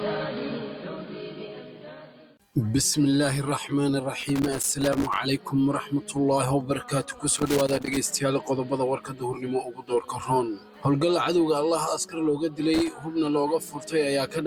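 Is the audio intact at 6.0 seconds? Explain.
Yes, at 6.0 seconds the audio is intact, with no dropout, click, distortion or other fault at that point.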